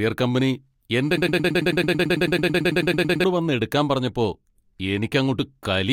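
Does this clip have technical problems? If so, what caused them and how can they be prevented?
Yes. From 1.17 s to 3.24 s, right after "കമ്പനി എൻ്റെ", the speech turns into a broken-record loop: a 110 ms fragment repeats exactly, back to back, 19 times before the audio resumes at "വന്ന് എടുക്കാൻ പറഞ്ഞപ്പോൾ". The likely cause is a stalled player or stream re-sending its last buffer, so the speech due in those two seconds is lost. Unlike an echo or reverb tail, each repeat is identical and undecayed. Sufficient buffering and a player that outputs silence on underrun would prevent it.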